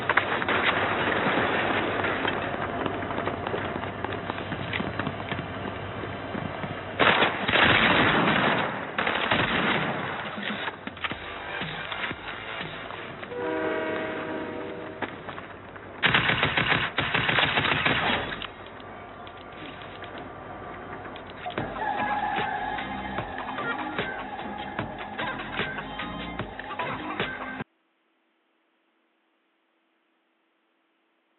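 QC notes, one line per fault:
No faults to log for this clip.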